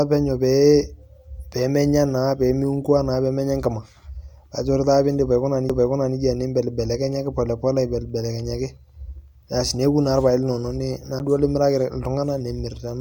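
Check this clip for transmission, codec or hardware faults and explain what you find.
Two CD skips interrupt this speech, at 5.69 s and 11.19 s. Each time the laser jumps to another turn of the disc's spiral. Playback mutes very briefly, a few milliseconds and then about 10 ms, with a tick. The speech then resumes from a different point.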